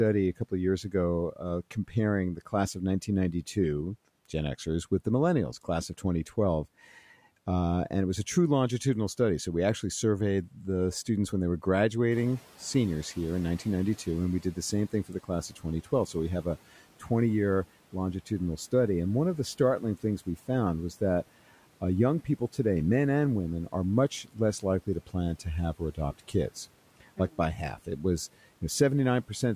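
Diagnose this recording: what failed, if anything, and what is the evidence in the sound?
The call-processing noise suppressor misjudged speech as noise four times: 0.38–3.57 s, 14.06–16.45 s, 23.72–26.34 s (after "men and women") and 27.0–27.87 s. In each case it was speech cut by the noise suppressor. Brief fragments, totalling a few tenths of a second, dip by about 10 to 11 dB and sound swallowed.

The noise suppressor was catching up at 12.11–14.57 s, just after "students when they were". The room noise jumps by about 11 dB around 12 s, and the suppressor's noise estimate trails it. For 2.46 s the noise leaks through before it settles about 10 dB lower.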